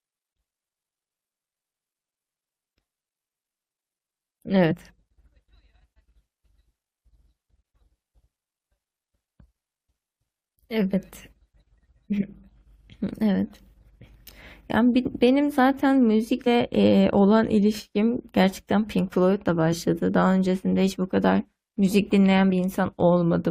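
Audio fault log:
4.70–4.74 s, 16.46 s, 19.72–19.75 s, 22.49–22.56 s: compressed frames skipped. The speech jumps ahead by about 100 ms at the first two, about 20 ms and 40 ms at the others, as whole frames go missing.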